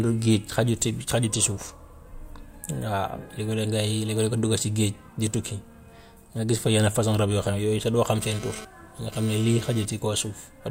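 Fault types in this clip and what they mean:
Dropped buffer (overrun), at 6.26 s: a small forward jump in the speech and no gap of silence. The likely cause is a capture buffer that was not read before the hardware wrote over it, so a short stretch of roughly 20 ms was lost and the audio on either side was spliced straight together. That abrupt join produces the slight skip in the sound.
GSM phone buzz, from 8.21 to 9.85 s, starting just after "doo xam": a hard, raspy buzz at about 217 Hz, rich in harmonics and unrelated to the speech, sitting about 16 dB below the signal. A nearby 2G phone transmits in short radio bursts at 216.7 per second, and the audio circuitry rectifies them into audible pulses. Here the buzz comes and goes, as it does when the phone is transferring data.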